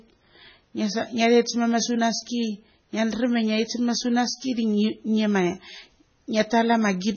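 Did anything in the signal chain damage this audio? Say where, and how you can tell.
Yes. Throughout, the speech sounds watery and swirly, with a metallic chirp on sibilants and nothing above 6.6 kHz. That points to the codec stage, likely heavy MP3 compression at a bitrate around 16 kbps, which cuts the treble and drops weak frequency lines from frame to frame.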